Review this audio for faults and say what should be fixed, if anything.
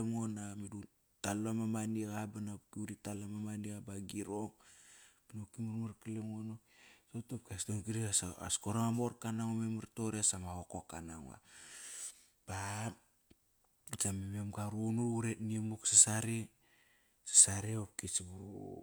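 Nothing in the signal calls for correction: the speech recording holds steady level and continuity throughout, with no technical faults heard that would need fixing.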